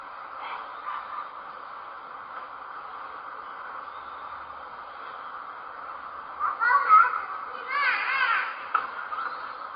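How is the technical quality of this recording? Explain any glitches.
The technical quality is poor, with compression damage throughout. Likely MP3 compression: everything above 5 kHz is missing, a flat ceiling on a spectrogram, with blotchy patches flickering below it. Starved of bits, fitting roughly 23 kbps, the encoder discarded treble and weak components, giving a dull, watery, swirling sound with smeared attacks.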